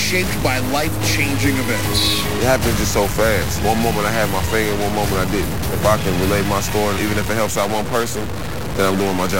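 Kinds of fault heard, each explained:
Stuck bit: buzzy distortion runs through the whole clip and fills even the pauses, unlike clipping; likely one converter bit stuck, with errors of about -20 dBFS.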